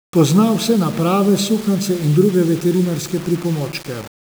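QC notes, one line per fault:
Throughout: low bit depth without dither. The speech is grainy and gritty, with distortion that tracks its level, roughening quiet stretches and sputtering or dropping out on the faintest. This likely comes from rounding to about 5 bits without dither, leaving error roughly 20 dB below the signal.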